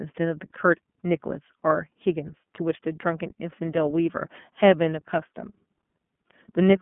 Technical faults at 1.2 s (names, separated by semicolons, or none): iLBC codec